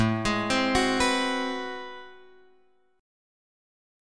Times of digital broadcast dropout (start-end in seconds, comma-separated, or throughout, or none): none